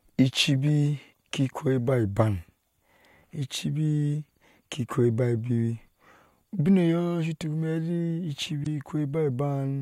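Right after "I cibi", from 1.09 to 1.17 s, there is damaged data in a compressed stream. The speech breaks into a short, harsh blip. Part of the encoded data there was corrupt, so the decoder misread those frames and lost sync. It then had to hunt for the next valid frame header. The same fault returns from 8.61 to 8.67 s. Each burst lasts well under a tenth of a second.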